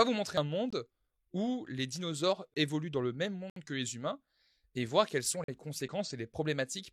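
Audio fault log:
0.38 s, damaged data in a compressed stream: corrupted bytes made the decoder misread a frame and lose sync.
0.70 s and 2.54 s, block of digital silence: the output buffer likely went unfilled for about 21 ms each time, which fits a 1024-sample buffer at 48 kHz. The speech drops abruptly to zero and returns.
3.50 to 3.56 s, block of digital silence: a 64 ms run of zeroed samples cuts the speech without any fade, heard as a short hole.
5.44 to 5.48 s, block of digital silence: about 43 ms of zeros, consistent with two missed 1024-sample buffers, gives a short hard dropout.
5.82 to 5.88 s, damaged data in a compressed stream: bad frames forced the decoder to resynchronise on the next header, disrupting the speech across about 64 ms.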